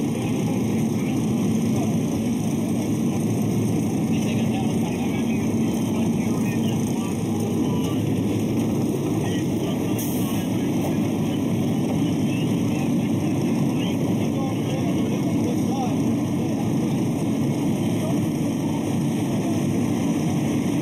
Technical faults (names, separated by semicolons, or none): channel delay (comb filtering)